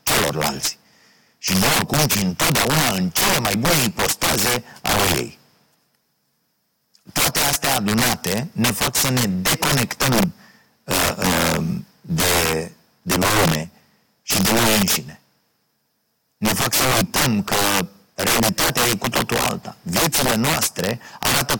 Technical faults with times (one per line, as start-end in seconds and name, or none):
0.00-21.60 integer overflow